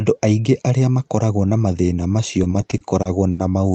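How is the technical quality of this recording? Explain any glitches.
There's one real glitch, a stutter near the end. The audio has come through an Opus call path and tops out around 8 kHz.

From 2.43 to 3.40 s, after "makoragwo na mathĩna macio", you get repeated stalls (stutter). Late packets drained the jitter buffer, and the receiver stretched the last sound over seven gaps of up to 70 ms, so it drags.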